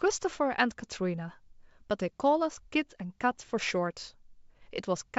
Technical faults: none

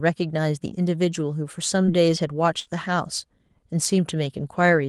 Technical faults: short concealed packet loss; burst of packet loss

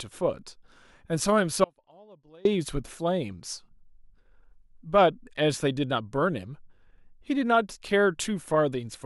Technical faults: audio dropout to a faint residue

